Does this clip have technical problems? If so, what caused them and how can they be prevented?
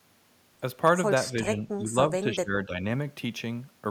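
Yes. From 1.32 to 2.83 s the speech is suppressed in double talk: for about a second in total it dips by up to about 15 dB. On a waveform the envelope shrinks in patches, and a spectrogram shows the energy fading. The likely cause is an echo canceller that heard both sides at once, could not separate the talker from the loudspeaker echo, and turned both down. Better double-talk detection and a less aggressive residual echo suppressor would prevent it.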